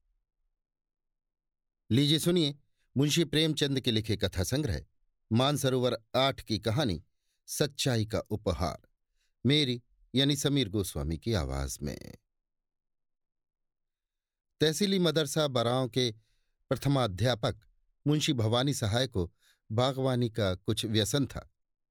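No technical faults can be heard anywhere in this recording.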